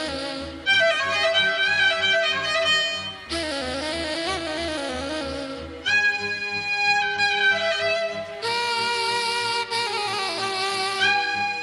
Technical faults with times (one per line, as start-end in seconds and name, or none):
none